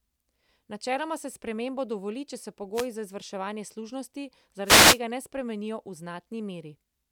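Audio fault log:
2.73–2.88 s, wireless microphone noise hit: a short burst of static about 0.14 s long, as the radio signal from the FM microphone briefly fades and the receiver's noise rises over the speech.
4.64–5.00 s, wireless microphone noise hit: a longer swish of about 0.36 s. Reflections cancel the radio signal here, so the receiver's noise rises over the speech.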